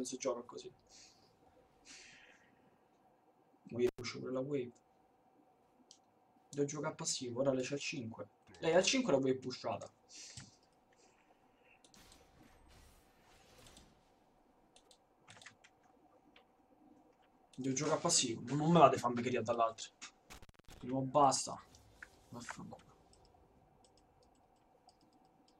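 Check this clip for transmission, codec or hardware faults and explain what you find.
Two hardware dropouts from intermittent contact, at 3.87 to 4.01 s and 20.30 to 20.81 s. Each is a loose cable or plug briefly losing its connection, so the signal path opens and the sound cuts out. The open gap lasts about 94 ms in the first event and about 261 ms in the second. Each gap is bracketed by crackle as the contact breaks and remakes, with faint hiss audible while the line is open.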